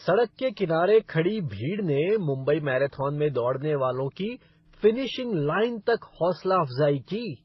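Throughout the speech, the top end stops dead at about 5.8 kHz, and under that ceiling the artefacts of the different codecs are heard together. That layered texture is the mark of transcoding between lossy codecs. The audio was likely coded at a very low rate, around 16 to 18 kbit/s, first as MP3 and then as HE-AAC, and finally re-encoded as WMA at 64 kbit/s. Each later pass spent bits re-encoding the earlier artefacts, and the narrowest cut-off survived.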